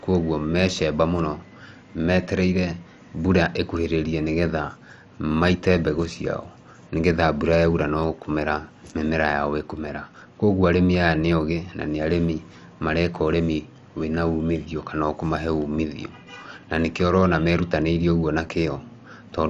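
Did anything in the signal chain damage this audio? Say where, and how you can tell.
Yes. Throughout the speech the sound is dull and gurgling, with granular distortion and nothing above 11.3 kHz, which points to the codec stage: likely MP2 compression at a low bitrate, around 48 kbps, where upper sub-bands are switched off and the remaining bands are coarsely quantised.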